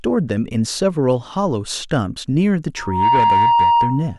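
Speech recording with loudspeaker feedback squeal from 2.76 s to 4.18 s: a pure tone near 939 Hz swells up within roughly a third of a second and settles a few dB above the speech. The microphone is re-amplifying its own loudspeaker, with loop gain exceeding unity at that frequency.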